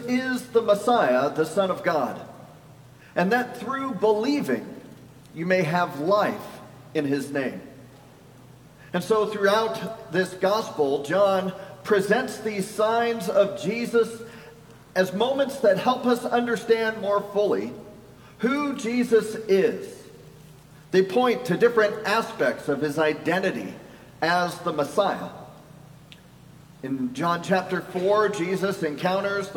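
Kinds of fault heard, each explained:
Nothing wrong turns up here; it's a perfectly ordinary listen with no faults to point out.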